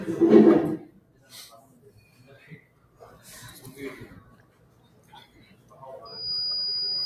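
Throughout, the sound pumps and thins, with held tones and tails sinking while sharp onsets punch through, a level swing of around 20 dB. A noise suppressor applied to music or sounds, built for speech, is treating sustained content as noise and pulling it down.

The sound is cut by the noise suppressor at 0.94–1.31 s, 1.62–2.26 s, 2.62–3.01 s and 4.24–5.78 s, dropping by about 8, 7, 8 and 8 dB. Steady or decaying parts sag.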